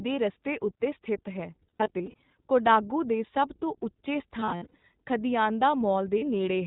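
The whole clip is speech carried through the iLBC codec, and the damage is plainly audible. The sound is narrowband and faintly rough and synthetic, which fits iLBC's 15.2 kbps mode with 20 ms frames. On a spectrogram, energy stops sharply at 4 kHz with nothing above it. The harmonics below look slightly smeared and grainy rather than cleanly banded.

From 1.62 to 2.14 s there are lost iLBC frames, about 220 ms of audio missing in short bursts scattered across roughly half a second. The longest run is around 70 ms. Each time, the decoder fills the hole by repeating the last pitch cycle with noise mixed in, so the speech briefly turns into a held, buzzy, slightly breathy vowel. On a waveform these gaps show as short stretches of repeated, gently decaying cycles. A spectrogram shows flat, frozen harmonic bands there instead of moving formants. Normal speech returns almost at once after each gap.

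The same concealment comes back from 4.40 to 4.84 s. This time about 280 ms is lost across that span, again in runs of up to around 70 ms.

A brief final loss comes at 6.18 to 6.23 s. It lasts about 40 ms and is heard as a short held buzz.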